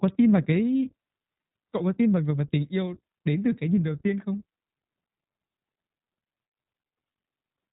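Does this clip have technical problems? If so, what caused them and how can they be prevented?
Yes, the whole clip carries iLBC codec damage: the speech is band-limited to 4 kHz and sounds plainly rough and synthetic, which fits 20 ms frames coded independently at around 15 kbps. To prevent it, record or transmit with a wideband codec instead.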